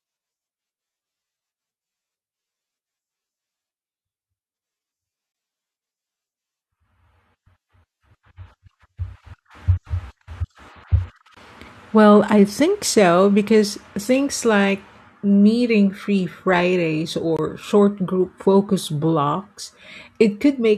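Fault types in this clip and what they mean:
Gap between chunks: the speech stops dead for about 21 ms at 5.32, 11.34 and 17.37 s, a hard-edged hole every 6 s. Nothing is skipped or repeated across each hole, so the speech resumes where it left off. That sets it apart from dropouts, which lose sound at irregular points.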